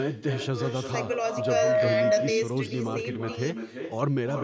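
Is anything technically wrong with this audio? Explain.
Yes, there are two problems.

First, there's an echo with no canceller running through the whole clip. Someone on the far end is listening on a loudspeaker, their mic picks the playback back up, and nothing strips it out. So every bit of speech returns about a third of a second later, only about 4 dB down, which is loud enough that each phrase is clearly shadowed by a quieter, thinner copy.

Second, there's a loudspeaker feedback squeal from 1.01 to 2.06 s. A mic is hearing the speaker it feeds, and at 632 Hz the loop gain tips past one, so that tone keeps feeding itself. You hear a steady pitch creep up over roughly the first three-quarters of a second and then ring out somewhat louder than the speech before it drops away. It's a single narrow howl sitting right in the middle of the vocal range.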